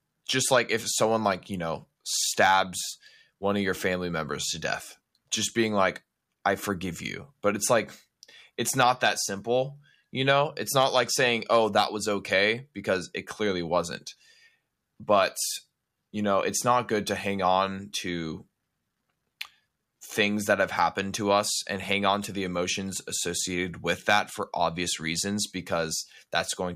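A speech recording with nothing technically wrong with it.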